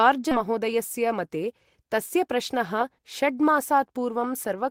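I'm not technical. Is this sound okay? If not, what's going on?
No. At about 0.31 s the speech suddenly jumps forward with no pause, losing close to half a second of talking. This is a skip ahead: a chunk of sound never reached playback, so the parts on either side were joined directly.

From 0.45 to 1.84 s and again from 2.28 to 3.73 s, the speech runs about 5 percent faster at the same pitch and sounds slightly hurried. This is a jitter buffer speed-up: after a backlog of sound piled up, the receiver trimmed many tiny slices, a small fraction of a second in all, to catch up.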